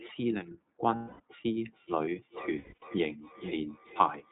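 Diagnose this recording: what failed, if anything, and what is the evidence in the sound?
The speech is band-limited below 4 kHz and sounds slightly rough and synthetic throughout. This is the iLBC codec, and the sound fits its 30 ms frame, 13.33 kbps mode.

From 0.96 to 1.20 s, and again in scattered gaps between 2.58 and 2.83 s, the sound becomes a held, buzzy vowel and then recovers at once. These are lost iLBC frames: network packets went missing and the decoder repeated the last pitch cycle mixed with noise.

From 1.53 s to the end, each phrase returns about every 0.4 s, thinner and ringing, at about 14 dB below the speech. This is feedback echo between two devices on the same call, a problem in call processing that one device's echo canceller cannot remove.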